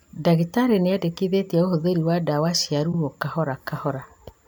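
At 2.91 s the speech stutters: the 52 ms stretch running to 2.97 s plays twice in a row. This is a case of repeated frames, where a short run of compressed data, about the length that fits two frames, was passed to the decoder a second time, adding 52 ms to the clip. Unlike an echo, the copy is identical and undecayed. Unlike a dropout, nothing is lost.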